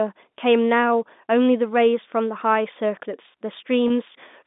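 At 3.88 to 3.90 s there's a brief packet loss with pitch repetition; the last pitch period gets repeated to fill a gap that fits one 20 ms packet, giving a short, slightly buzzy held sound over the G.711 telephone band.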